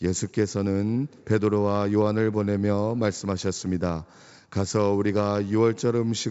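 No technical faults occur in this speech; it comes through G.722 wideband telephone coding at 64 kbit/s, with nothing above about 7.7 kHz.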